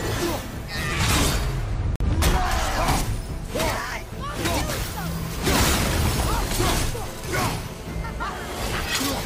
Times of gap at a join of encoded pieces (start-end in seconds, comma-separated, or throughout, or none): 1.96-2.00